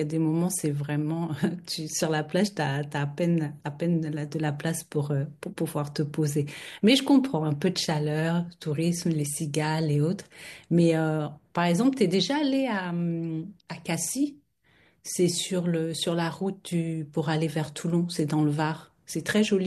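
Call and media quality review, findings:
No faults found in the speech clip. No action required for this item.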